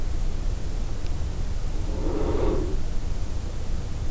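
From start to finish the speech runs at roughly a third of its proper speed, a classic wrong sample rate fault. The samples are being clocked out far slower than they were captured, with no conversion, so tempo and pitch both drop by the same ratio, about 0.36. That works out to a pitch drop of 17.6 semitones, which fits 44.1 kHz material played at 16 kHz. The result is a deep, dragging voice.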